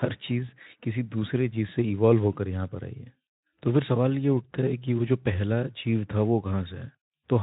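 Nothing in this speech stood out on listening as a technical fault.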